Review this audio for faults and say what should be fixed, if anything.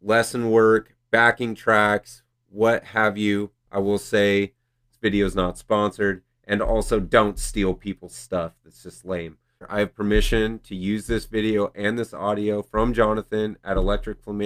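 Nothing here needs fixing, so you can leave this one as it is.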